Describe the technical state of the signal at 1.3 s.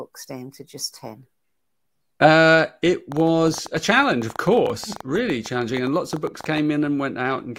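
At 1.3 s the speech comes through intact, with no dropout, click, distortion or other fault at that point.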